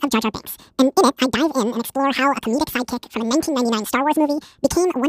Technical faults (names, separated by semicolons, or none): audio read two samples at a time (double speed)